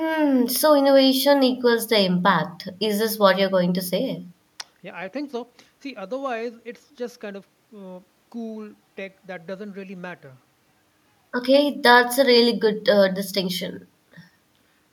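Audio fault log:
No faults found across the speech clip; nothing to log.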